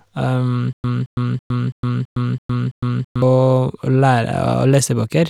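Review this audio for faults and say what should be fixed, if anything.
Stutter with silent gaps, 0.73 to 3.22 s: a 220 ms fragment of the speech plays, then about 110 ms of digital silence follows, and the pair repeats seven times at an even 331 ms period. This is likely a stalled player or stream that replays its last buffered fragment at each retry and then runs dry, so the speech that belonged in those 2.5 seconds never plays. To prevent it, give the playback path a deeper buffer and make it resume from new data instead of replaying stale fragments.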